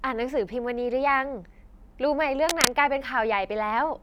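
A worn cable or connector likely shifted in this speech recording, causing cable scratch noise from 2.49 to 2.68 s: a dense rustling burst about 5 dB above the speech.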